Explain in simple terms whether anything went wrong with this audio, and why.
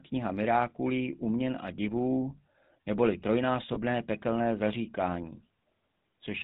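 The speech went through the old GSM full-rate codec, which rebuilds the voice from pulses and drops everything above 4 kHz, so the whole clip sounds plainly buzzy and gravelly.

There are also lost GSM frames. Twice, a short piece of the signal went missing and the last good sound was repeated to fill the gap. Each gap fits a single lost 20 ms frame and leaves a brief metallic ring. The first is at 1.76 to 1.79 s, just after "uměn a", and the second is at 3.74 to 3.78 s, just before "pekelné zaříkání".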